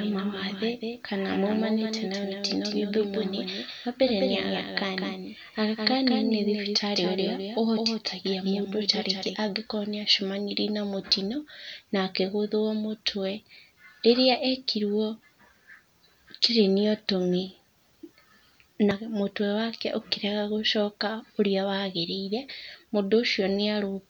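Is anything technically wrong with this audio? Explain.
Yes. A doubled audio track runs from the start to 9.36 s. A full-band copy trails the speech by about a fifth of a second and is roughly 5 dB quieter, likely from a slower second capture path. It sounds like dry slapback that ends abruptly. A spectrogram shows each syllable twice, with the fainter copy shifted right.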